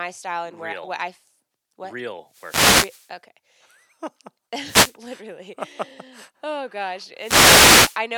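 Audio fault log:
2.26–3.15 s, 4.62–4.97 s and 7.17–8.01 s (the last just after "oh gosh"), wireless microphone noise hit: bursts of hissing static swish over the speech. The analogue FM radio link fades as reflected signals cancel, so receiver noise surges up.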